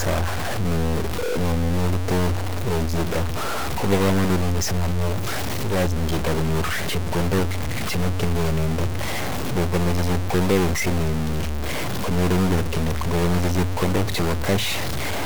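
From start to end, the speech carries a harsh, buzzy distortion. The likely cause is a stuck bit, where one bit of each sample is held at a fixed value. Roughly half the samples are pushed off by a step of around -20 dBFS. The error follows the waveform. In the pauses it does not go quiet. The stuck bit's error changes with the sign of small values and the gaps fill with noise.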